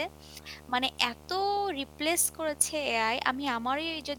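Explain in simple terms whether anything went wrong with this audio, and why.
Video or display buzz runs from start to finish, a steady low hum with a fuzzy hiss riding on top of it, sitting underneath the speech. A screen or video cable was close enough to the audio wiring that its electrical activity leaked in. The picture redraws 75 times a second, so the buzz repeats at 75 Hz. It is well below the speech.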